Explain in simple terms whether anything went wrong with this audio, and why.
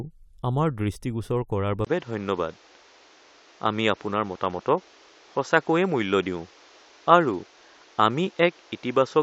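At 1.85 s, just after "দৃষ্টিগোচৰ কৰাৰ", the sound briefly drops out. It then turns duller and boxier until the end, with nothing above about 7.6 kHz. It gets somewhat louder, with new background hiss. This is likely an input switched to a poorer device.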